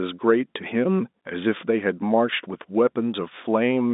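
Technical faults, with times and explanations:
No technical faults are audible.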